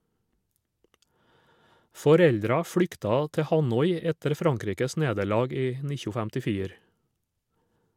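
From about 0.11 s right through to 7.91 s the speech carries clock slip clicks: faint, evenly spaced ticks, roughly ten a second, clearest under the louder, sustained stretches. The likely cause is two devices running on separate clocks, about 200 ppm apart, with nothing locking them together. Each click sounds like a single sample being dropped or repeated whenever that drift adds up to a whole sample, which explains the steady spacing.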